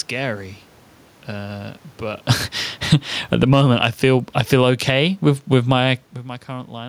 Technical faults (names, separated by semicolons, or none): automatic gain falling; automatic gain rising